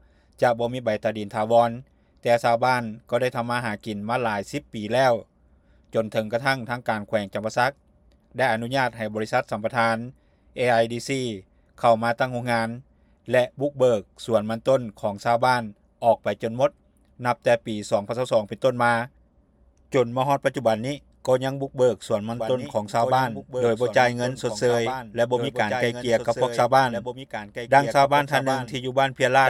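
From 22.37 s onward, a doubled audio track, likely a slower second capture, repeats the sound two seconds late, about 10 dB quieter, starting abruptly without echo-like decay.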